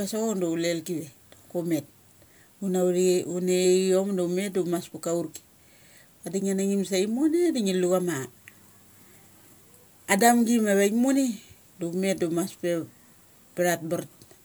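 No faults detected anywhere in the speech recording.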